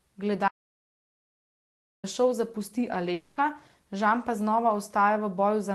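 At 0.48 s the speech cuts off abruptly and the track goes to silence until 2.04 s, when it resumes mid-flow with "da šov zapusti". This is an audio dropout to silence, most likely the input being lost while the recorder kept writing silence. About 1.55 s of speech is simply gone. Unlike a network dropout, nothing bridges the gap: there is no fading buzz, and even the room tone vanishes completely.

From 3.13 to 3.40 s, shortly after "da šov zapusti", a long network dropout sounds quite different. For about 240 ms the receiver stretches the last sound into a synthetic, fading buzz instead of real speech. No stretch of true silence follows before the audio returns, so the hole is masked rather than empty, though the speech that should have filled it is missing. The likely cause is that packets stopped arriving on the call link. The Opus call path adds its coding noise throughout and cuts off the upper range near 12 kHz.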